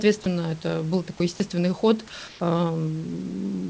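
At 1.36 to 1.40 s, just after "это был такой", 40 ms of speech gives way to a short patch of flat hiss, losing about 20 ms of sound. This is sound dropped by the voice detector, likely because it mistook the sound for background and stopped sending while comfort noise filled in.

From 2.28 to 2.40 s, the real background is replaced for 120 ms by comfort noise in place of the background. The background sits about 24 dB below the loud passages, and the substitute is smooth and featureless, about 1 dB quieter, likely from discontinuous transmission during a pause. Like the rest of the clip, it carries nothing above 8 kHz.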